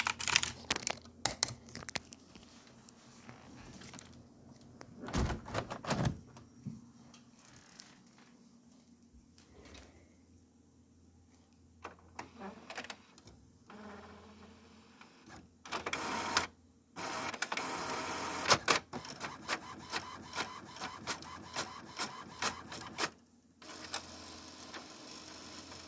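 No technical faults are audible.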